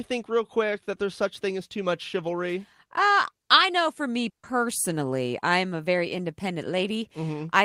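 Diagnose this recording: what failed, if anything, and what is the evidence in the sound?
Just after "I know for me", from 4.29 to 4.45 s, the last sound is held and fades away, then speech resumes with about 140 ms skipped. This is a burst of packet loss on the network: the receiver stretched and faded the last sound to cover the missing packets.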